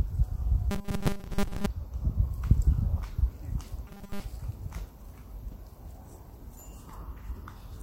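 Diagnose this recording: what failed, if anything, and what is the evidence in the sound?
From 0.71 to 1.66 s and again from 3.88 to 4.23 s the sound turns into a rigid, metallic buzz locked at 200 Hz, still loosely tracing the shape of the audio. This is robotic sound from repeated short buffers, likely at the driver or buffer stage. New audio arrived too seldom, so the last short stretch was replayed over and over while most of the real signal was skipped. A 200 Hz buzz fits a repeated segment of about 5 ms.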